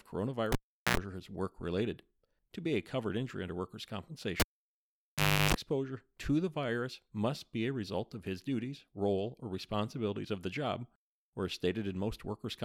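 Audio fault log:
0.52–0.97 s, cable pulled and plugged in: a pop, then about 0.40 s of near silence, then an 82 ms burst of 60 Hz mains buzz as only the plug tip made contact, and a second pop as the signal returned before "is work related".
4.40–5.54 s, cable pulled and plugged in: after "covered injury under workers'", a pop and about 1.10 s of dropout, including 0.34 s of 50 Hz hum from the ungrounded tip, then a reconnect pop.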